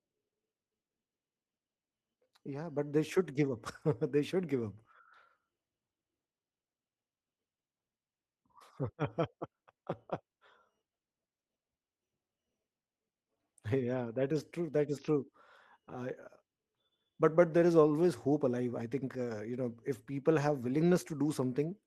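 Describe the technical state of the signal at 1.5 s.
At 1.5 s the signal is intact, with no dropout, clipping, glitch or other fault present at that point.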